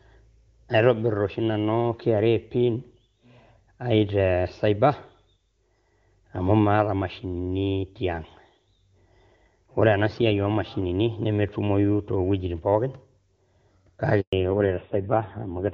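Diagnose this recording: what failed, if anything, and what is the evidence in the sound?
A handover gap appears at the network stage. The sound dies away at 14.21 s and stays silent until 14.33 s, about 120 ms. The call was passed between networks, and no frames arrived during the switch. That audio is simply lost.

A fallback to narrowband follows at the codec stage, from 14.33 s to the end. Before this, the sound was clear wideband, which fits high-rate HD Voice. Now nothing above 4 kHz remains. The sound is duller and rougher, which points to a low-rate narrowband codec.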